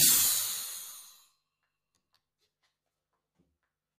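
Channel delay (comb filtering) runs throughout: one channel lags by about 10 ms, and summing to mono cancels evenly spaced frequencies from roughly 40 Hz upward, leaving a hollow, phasey sound.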